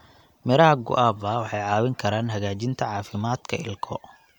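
No technical faults are audible.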